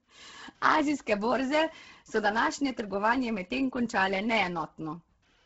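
From start to finish the speech carries heavy damage from what is likely Bluetooth LC3 compression. Nothing survives above 7.8 kHz, and the top of the band that remains sounds breathy and grainy, as if hiss has been painted over it. That fits a low-bitrate LE Audio link, somewhere around 16 kbps with 10 ms frames, where the encoder throws away most of the upper spectrum and fills the gaps with noise instead of real detail.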